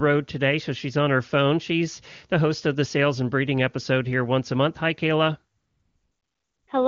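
A speech clip carried over an AMR wideband (HD Voice) link, with the speech sounding clear enough to fit one of the higher AMR-WB rates. From 5.57 to 6.67 s there is AMR comfort noise. For 1.1 s the sender judged the line silent and stopped sending speech frames. The receiver filled the gap with a smooth, steady synthetic hiss. The real background drops out, and the fake noise switches in and out at the gap's edges.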